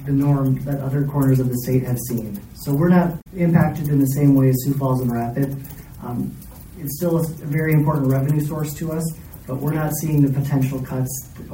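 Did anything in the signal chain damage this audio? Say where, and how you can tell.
Yes: damaged data in the compressed stream at 3.18–3.27 s. Corrupt frames desync the codec's decoder, causing a brief disruption while it searches for the next frame header.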